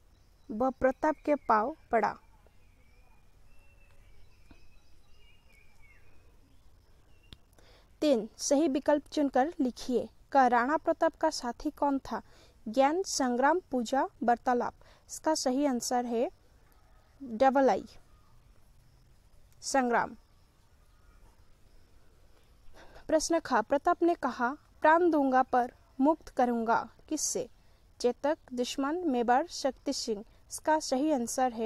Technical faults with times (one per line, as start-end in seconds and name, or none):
none